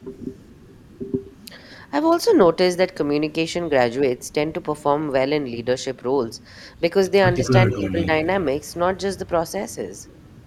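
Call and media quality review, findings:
Echo leak, 0.39–0.54 s, 2.09–2.33 s, 7.33–7.50 s, 7.69–8.06 s, 9.99–10.32 s. Delayed copy of speech trailing by 175–180 ms, faint (about 40 dB down) to prominent (about 10 dB down near 7.7–8.1 s). Likely residual loudspeaker pickup not fully removed by the echo canceller and being sent back.

Speech suppressed in double talk, 7.77–7.97 s. Speech level dips by about 5 dB, roughly a tenth of a second affected, during the strongest echo. Likely echo canceller unable to separate the talker from the echo, attenuating both.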